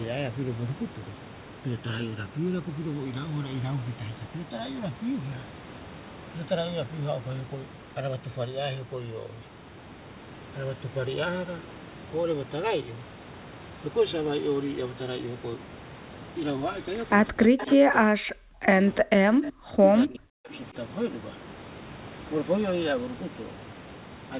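Throughout the clip the two channels drift apart. They sit on clocks that disagree by something like 150 parts per million, so the inter-channel delay slowly grows to around 4 ms by the end. Folded to mono, the resulting comb notches creep through the spectrum, giving a slow, swirling flange. A spectrogram shows dark bands sliding diagonally across the speech, which is already band-limited at 4 kHz by the call path.

Between 17.32 and 18.68 s, and again from 19.02 to 19.83 s and 20.07 to 20.52 s, the speech is suppressed in double talk, likely because an echo canceller clamped down while both sides spoke at once. The voice ducks by as much as about 40 dB, thins or drops out in fragments, adding up to roughly a second, then 0.7 s, then half a second. On a waveform these appear as sudden hollow notches in the envelope, and the spectrogram shows broken, faded harmonics.

Inside the first two suppressed spans there is an echo leak, likely residual loudspeaker pickup that the canceller failed to remove. 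A short delayed copy of the voice returns at 17.58 to 17.72 s, about 380 ms late and roughly 15 dB down, and a fainter scrap at 19.44 to 19.5 s, about 384 ms late and around 25 dB down. Each sounds like a brief ghost of the speech. The spectrogram shows a weak duplicate of earlier harmonic patterns shifted in time.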